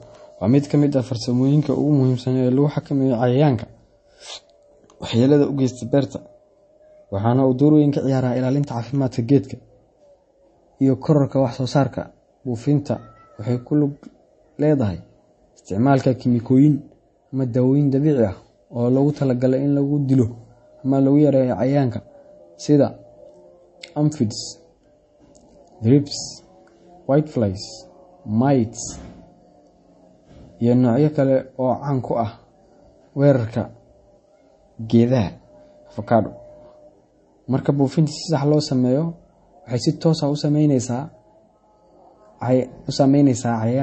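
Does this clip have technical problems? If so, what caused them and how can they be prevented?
Yes. Throughout the speech, nothing remains above 8.3 kHz, and the sound is plainly watery and swirly. This is likely MP3 compression at a low bitrate, which fits about 32 kbps. Short of bits, the encoder cuts the treble and drops weak frequency lines that flicker on and off between frames. A simple low-pass filter would dull the sound without that swirl. Encoding at a higher bitrate, or keeping a lossless master, prevents it.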